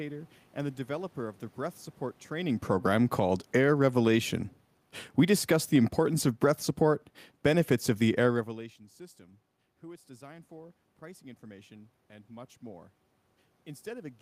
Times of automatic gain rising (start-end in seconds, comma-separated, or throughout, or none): 3.06-4.53, 8.97-12.99